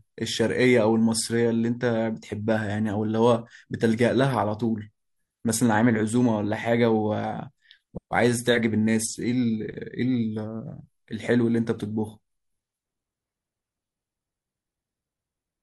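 No technical faults to report anywhere in the speech.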